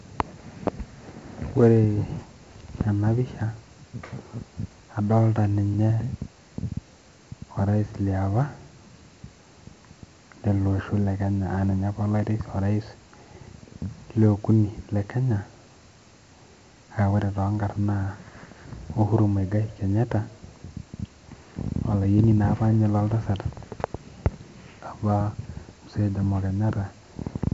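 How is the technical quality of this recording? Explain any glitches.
The quality is poor throughout. The speech passed through 4-bit ADPCM compression, heavily, with a bandwidth that fits a 64 kbps stream. Each sample is coded as a coarse 4-bit step from a prediction, so level-tracking grit rides on every loud syllable, attacks distort, and nothing remains above 7.7 kHz, leaving the sound dull.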